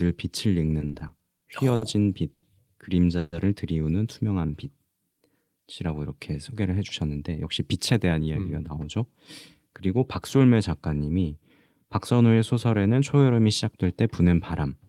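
Speech, with four network-timing faults. From 0.79 to 1.84 s there are repeated stalls (stutter). Seven brief gaps appear, the longest 60 ms, totalling 150 ms. Packets kept arriving late, so the jitter buffer ran empty each time. The receiver extended the last sound to cover each gap. The speech drags and stutters, but nothing is missing. From 2.34 to 2.45 s comes a short stall from a late packet. One packet missed its slot and the buffer emptied. The last sound is held 90 ms too long, with a slight buzz or dip. The audio then resumes from the same point. From 3.19 to 3.35 s the sound halts for 140 ms and becomes a fading buzz or hiss. It then carries on where it stopped, so a gap has been inserted and nothing is lost. This is a call audio freeze, likely caused by packets held up in transit. Between 6.54 and 8.28 s a jitter buffer speed-up makes the speech run about 10 percent fast at unchanged pitch. 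The buffer had built up more audio than it aims to hold. The receiver trimmed short pitch-period slices many times in a row, roughly a fifth of a second in all. The delivery sounds hurried.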